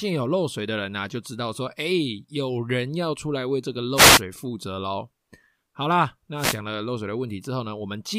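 At 3.95 to 4.22 s and again at 6.36 to 6.59 s, a wireless microphone noise hit: the FM radio link fades as reflections cancel, raising receiver hiss into a brief static swish over the speech.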